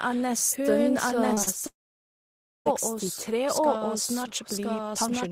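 Doubled audio track throughout this speech recording: a second full-band copy, about as loud as the original, trails it by about a second with no room colour, likely from a slower capture path or misaligned edit. Short concealed packet loss at 1.33 to 1.39 s and 1.43 to 1.49 s: 40 ms gaps, each patched by continuing the preceding sound, leave brief smears or wobbles. Long network dropout from 1.67 to 2.67 s: the receiver extends the last sound briefly before it fades into near silence for most of that second, then speech resumes with the gap missing, likely because no packets arrived.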